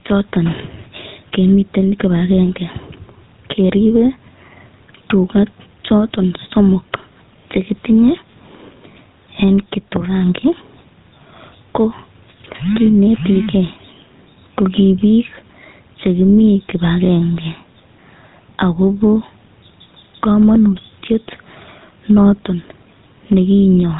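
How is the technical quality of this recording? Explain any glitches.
Technically it's rough, with two problems running the whole way through.

Gain pumping: the gain swings by roughly 10 dB, pulling down whenever the talker gets loud, squashing loud and soft together. The likely cause is input gain set far too high, with a fast limiter clamping down on each peak.

GSM full-rate codec: the speech has a buzzy, gravelly roughness and nothing above 3.8 kHz, which fits the 13 kbps GSM full-rate codec. It rebuilds the voice from a vocal-tract model driven by sparse, regularly spaced pulses, hence the coarse, grainy texture.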